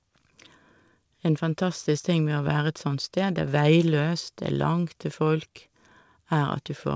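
Nothing goes wrong anywhere in this speech recording; it simply has the sound of a call, with nothing above 8 kHz, which fits a wideband call codec such as G.722 running at 64 kbps.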